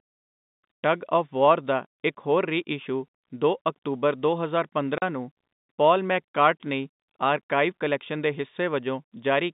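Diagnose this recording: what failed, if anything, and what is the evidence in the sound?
The failure is at the network stage: packet loss filled with silence. At 4.98 s the speech drops out completely for 40 ms, resuming at 5.02 s, with abrupt edges at both ends of the gap. The hole length fits two consecutive 20 ms packets going missing. The receiver had no concealment and played silence in their place. The G.711 telephone coding underneath, limited to roughly 150 Hz to 3.7 kHz, is unaffected by the dropout.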